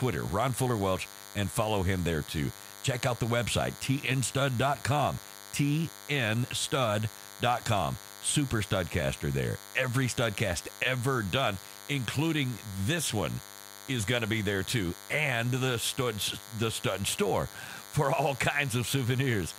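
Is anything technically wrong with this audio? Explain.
Yes. Throughout the speech there is a steady, thin, raspy buzz that sits well under the talking, at roughly 20 dB below it. It is pitched at 100 Hz and carries a dense stack of harmonics. This is DECT cordless phone buzz. A DECT handset or base station nearby transmits a brief radio burst every 10 ms. The audio circuitry rectifies those bursts, so each one becomes a small click, and together they repeat at 100 Hz.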